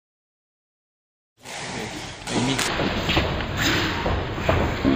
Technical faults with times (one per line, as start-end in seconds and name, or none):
2.68-4.95 stereo read as mono